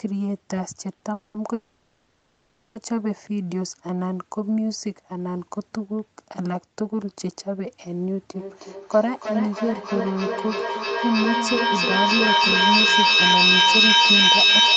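A speech recording carried over a call, band-limited with nothing above 8 kHz. At 0.95 to 1.04 s there is a short stall from a late packet: a sound is held about 60 ms too long with a faint buzz or dip, because the jitter buffer ran dry and the receiver stretched the last audio until the packet turned up. Nothing is lost; the speech resumes where it left off, 60 ms later. Two call audio freezes follow, at 1.13 to 1.37 s and at 1.54 to 2.78 s. In each, the last sound is drawn out into a fading buzz or hiss rather than dropping to silence, lasting about 210 ms and then 1.21 s, before the speech picks up again from the same point. The likely cause is packets held up in transit emptying the jitter buffer, so each freeze inserts a gap and pushes everything after it later without removing any speech. From 8.34 s to the end of the clip there is feedback echo between two devices. Each stretch of speech returns at a steady interval of roughly 300 ms, thinner and more ringing each time. 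The repeats build up instead of decaying, peaking about 8 dB above the direct speech. That build-up is the mark of a second device in the same room replaying the call into the microphone, a loop the echo canceller cannot remove.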